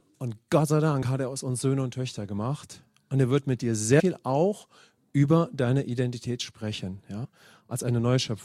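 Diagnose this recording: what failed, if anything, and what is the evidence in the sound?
The codec stage dropped compressed frames: whole frames never reached the output, so the speech jumps forward. The first skip is at 1.02 s, just before "hat er aus uns", and loses about 30 ms. The second, at 3.99–4.01 s between "er wird mit dir" and "auch über deine", loses roughly 150 ms. The third, at 7.24–7.26 s, loses about 100 ms. On a spectrogram, formant tracks break and resume abruptly at each point. The waveform shows a discontinuous envelope.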